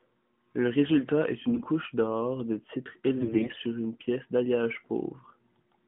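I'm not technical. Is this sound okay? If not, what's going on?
No. Twice the speech turns hoarse and gargly: from 1.48 to 1.67 s, after "résultat est", and from 3.18 to 3.60 s, before "une pièce d'alliage". These are AMR bit errors. A weak phone link scrambled part of the coded data, so the voice keeps its level but sounds scratchy.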